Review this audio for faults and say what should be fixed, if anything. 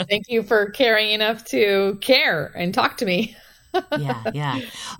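There's a USB whine under the speech for the whole clip, a thin fixed tone at 8 kHz, sitting well down, around 45 dB below the speech. That pitch comes from the USB bus's 125-microsecond microframes. Each burst of bus activity pulls a little current, and that ripple is getting into the audio through the shared power or ground, so you end up with a steady high whine right at the microframe rate. To prevent it, power the interface from a clean supply or through a powered hub, or break the ground loop with a USB isolator.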